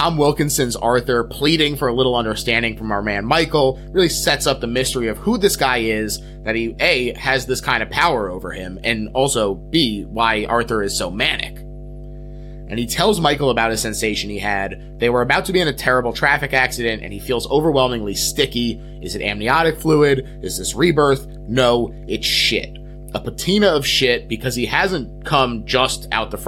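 Running under the speech from start to finish there's mains hum, a steady low drone sitting right at 50 Hz with a few low harmonics stacked on top. Something, most likely a ground loop or a transformer close to the cabling, let the power line bleed into the signal path. It sits roughly 15 dB below the speech.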